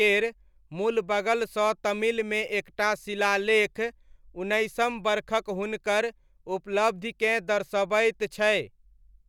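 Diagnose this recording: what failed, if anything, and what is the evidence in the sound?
Nothing failed here: the speech signal arrives intact and continuous, holding a steady level with no disturbance traceable to any stage of the chain.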